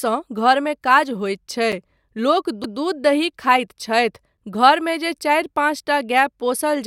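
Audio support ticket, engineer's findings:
Short hard-edged dropout in the speech at 1.72 s, about 7 ms of silence. Gap between chunks: chunk join in the delivery or playback path, with 2.5 s chunks. Silence inserted at the join, likely codec padding or a late chunk start in the player.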